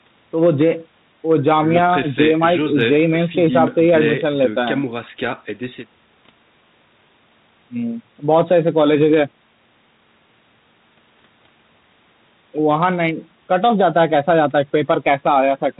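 No technical faults can be heard anywhere in the speech. The G.726 ADPCM path at 32 kbit/s works as expected, cutting everything above 4 kHz and adding only a light layer of coding noise that rises and falls with the speech level.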